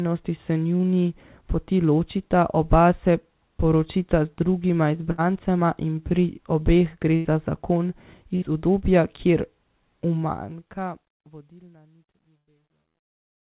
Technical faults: burst of packet loss; truncation distortion on a fade

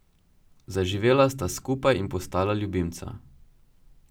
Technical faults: none

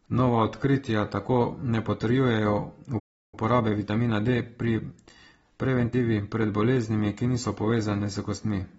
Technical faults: AAC compression; playback stall; time-compressed catch-up

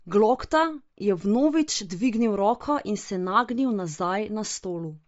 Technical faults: Bluetooth LC3 compression

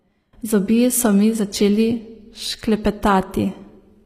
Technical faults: HE-AAC compression

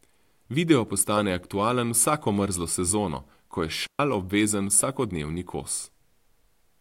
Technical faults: digital wireless dropout

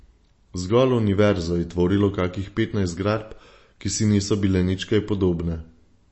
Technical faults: MP3 compression

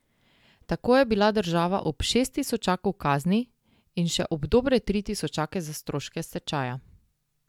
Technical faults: none

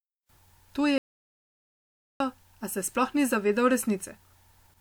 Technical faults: audio dropout to silence

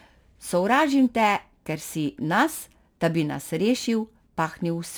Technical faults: crude rate conversion

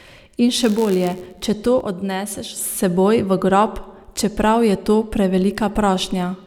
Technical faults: block size mismatch (padded); sudden gain jump

